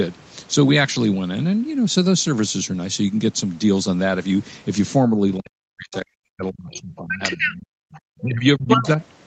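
From 5.11 to 7.74 s, speech is suppressed in double talk for about 2 s in total. It drops by up to about 40 dB. The echo canceller likely turned the talker down along with the echo. From 5.92 to 5.97 s, the other side's voice leaks through at about 20 dB below the speech, and again from 7.91 to 8.0 s at about 25 dB below. From 8.21 to 8.99 s, suppression in double talk returns, with drops of up to about 30 dB across about half a second.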